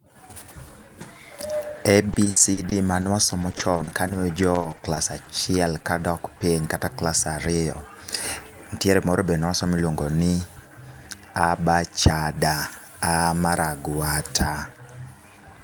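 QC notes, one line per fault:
2.13–6.43 s, repeated packet loss (robotic sound): 26 dropouts, the longest 60 ms, each patched by stretching the last sound, so it goes choppy and robotic right up to "kata klas".
12.42–14.42 s, pre-emphasis left on: just after "a ba cha" the treble is about 8 dB hot at 10 kHz, so it sounds thin and hissy; it fits an uncorrected CD-style 50/15 µs boost.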